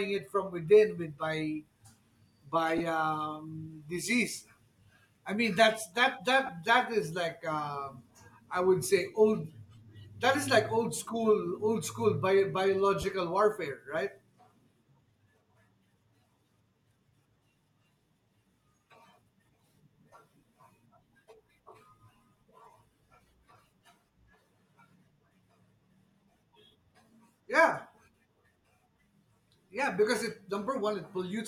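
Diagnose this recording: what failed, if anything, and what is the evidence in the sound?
Three brief spots where the speech turns into a short, hissy smear instead of dropping out cleanly: 2.78 to 2.80 s, 6.46 to 6.49 s, and 13.02 to 13.04 s. These are lost LE Audio frames on the Bluetooth LE Audio link (codec stage). The gaps last about 22.5, 22.5 and 15 ms, which fits two or three 7.5 ms LC3 frames. The decoder covered each gap by repeating the last spectrum with scrambled signs, so tonal detail turns to noise.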